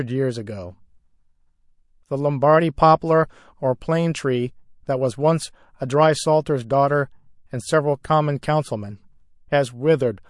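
The speech carries plainly audible MP3 compression throughout, a watery, swirling texture with metallic chirps on s sounds and smeared attacks, consistent with a low bitrate around 48 kbps. Unlike a simple low-pass filter, weak frequency components flicker on and off between frames, likely from bit starvation in the encoder.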